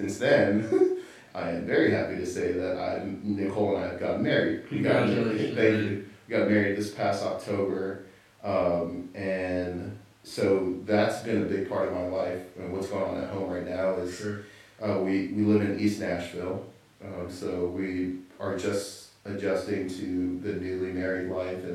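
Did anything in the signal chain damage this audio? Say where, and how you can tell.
No, nothing in the chain damaged this recording.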